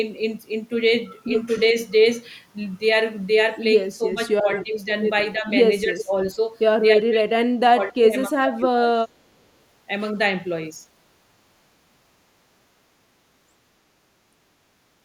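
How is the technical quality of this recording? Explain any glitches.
The recording has two echo-cancellation faults between about 4 and 9 seconds. Speech suppressed in double talk occurs at 3.97–4.47, 4.63–4.9, 5.34–5.47, 5.85–6.41 and 6.97–9.08 s. The canceller, likely confused by simultaneous talk, turned speech down by about 5 to 30 dB, so the voice dips and breaks up, worst at 6.97–9.08 s. Echo leak occurs at 5.98–6.04 s. Residual loudspeaker pickup, likely unremoved by the far-end canceller, returns a brief copy delayed 314 ms, about 10 dB below the speech.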